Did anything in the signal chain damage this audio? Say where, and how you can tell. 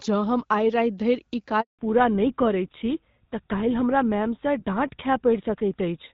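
Yes. Handover gap at 1.61 to 1.79 s, in the network: speech stops for 180 ms while the call changes networks and no frames arrive.

Fallback to narrowband from 1.79 s onward, at the codec: nothing remains above 4 kHz, which fits a switch from HD Voice to GSM full rate, and speech sounds duller.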